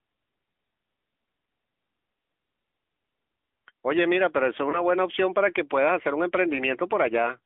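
Throughout, the speech carries AMR narrowband mobile codec damage. Nothing passes beyond a 200 Hz to 3.4 kHz telephone band, and the low-bitrate vocal-tract model makes the voice buzzy and synthetic, which fits a mode around 10.2 kbps. That buzz is what separates it from plain band-limiting.

From 4.70 to 4.85 s there is a lost AMR speech frame, consistent with a single 20 ms frame. The decoder repeats the last pitch and spectral settings at falling gain, giving a brief dip or warble rather than a click or a hard gap.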